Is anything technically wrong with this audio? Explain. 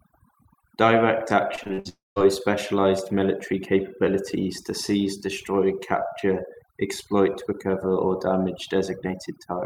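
Yes. Overdone noise removal runs through the whole speech clip: aggressive per-band gating leaves near-silent gaps with twinkling specks. On a spectrogram the background goes black with scattered isolated dots.

From 1.55 to 1.87 s there is repeated packet loss with a robotic sound. Five gaps, the longest about 56 ms, are each patched by repeating the last sound, so roughly half the span is concealed. The audio turns choppy with pieces missing, and a spectrogram shows smeared, repeated frames broken by vertical seams.

From 1.89 to 2.18 s, just before "specialized military capabilities to", the sound continues as a fading buzz and then falls silent for about 190 ms. A long network dropout is the likely cause. The waveform shows a decaying tail, then a flat line until the audio resumes.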